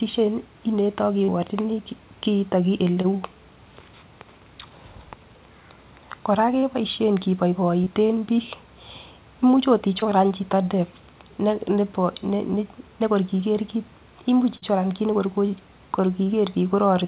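A speech recording carried over a call link, band-limited to nothing above 4 kHz, which fits G.711 mu-law at 64 kbps, shows short concealed packet loss at 1.24, 3.02, 6.6, 7.84, 10.0, 14.58 and 16.24 s. Each lasts about 36 to 60 ms, where the receiver stretched the preceding sound into the hole and blended back. Unlike a true dropout, these gaps are never silent; they come through as brief smears or wobbles.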